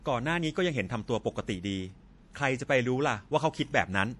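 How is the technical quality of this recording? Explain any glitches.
The recording's quality is plainly compromised by lossy encoding. Likely MP3 compression, throughout: short of bits, the encoder cuts everything above 11.4 kHz and toggles weak frequency lines, so speech sounds dull and watery.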